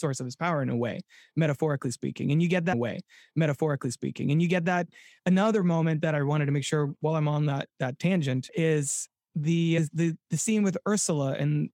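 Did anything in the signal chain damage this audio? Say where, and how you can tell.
Yes. A stream segment repeated at 2.72 s, right after "you get", and the passage replays through 4.72 s, adding about 2.0 s. The damage sits at the streaming and playback stage. The player fetched or queued the same chunk of the stream twice, so the speech jumps back and plays that stretch again. A small blip marks the jump, where the end of one copy butts against the start of the next with no crossfade.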